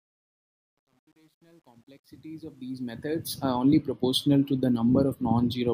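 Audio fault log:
0.00–3.44 s, truncation distortion on a fade: the fade-in is gritty, worst until 2.45 s, because quiet levels fall onto a few coarse steps, pointing to about 10 bits without dither. Unlike gate chatter, grit tracks the level.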